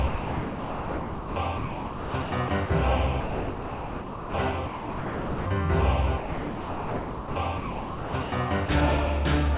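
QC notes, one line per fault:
0.08–2.7 s and 6.18–8.32 s, sound chopped by the voice detector: the detector likely toggled on and off repeatedly, swapping about 2 s and 1.84 s of sound for comfort noise in several pieces. The sound has repeated holes rather than one clean gap.
3.2–4.34 s, 4.66–5.46 s, 8.66–8.68 s and 9.56 s, sound dropped by the voice detector: sending likely stopped once per event, so each stretch (1.14 s, 0.8 s, 20 ms, and a final sliver at the end) gives way to a single steady bed of comfort noise until the sound returns or the clip ends, with no flickering.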